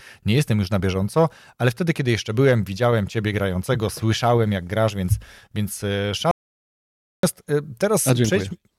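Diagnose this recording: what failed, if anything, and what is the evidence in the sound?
The speech cuts off mid-flow right after "grasz więc więc e" at 6.31 s and goes dead silent, with no room tone, until 7.23 s, about 0.92 s lost. That's an audio dropout to silence. The likely cause is the input device or link dropping out while the recorder kept writing zeros.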